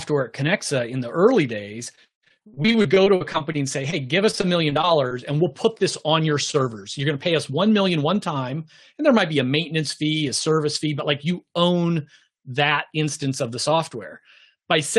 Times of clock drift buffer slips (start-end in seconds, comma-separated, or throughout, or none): none